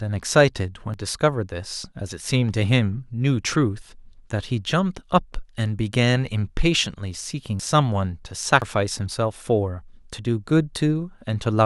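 At 0.94 s the speech jumps ahead, losing roughly a third of a second, and shorter skips of about a tenth of a second follow at 7.60 and 8.62 s. Each is a jump in the sound where a dropped buffer (overrun) likely spliced the audio together, seen as a vertical spectrogram line and a waveform discontinuity.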